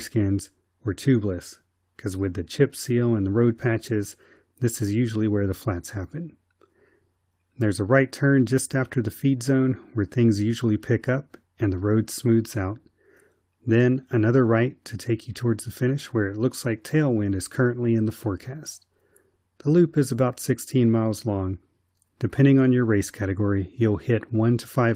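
Nothing in this speech recording stood out as a fault on listening.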